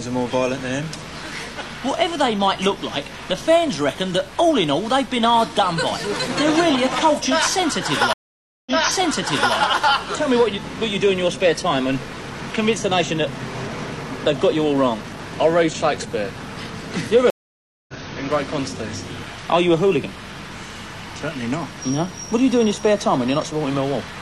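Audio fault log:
8.13–9.55 s, stream reconnect: audio drops out for 533 ms, then a fresh decoder resumes 882 ms earlier, so a short stretch repeats after the gap.
17.30–17.94 s, stream reconnect: 582 ms of silence, then playback resumes roughly half a second later, skipping material as the restarted decoder picks up the live stream.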